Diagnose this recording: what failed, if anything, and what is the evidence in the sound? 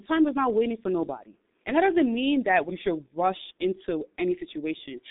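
Speech sounds muffled and hoarse throughout, with smeared consonants and nothing above 3.7 kHz: a G.723.1 codec stage, whose coarse 30 ms frames fit a 6.3 kbit/s stream.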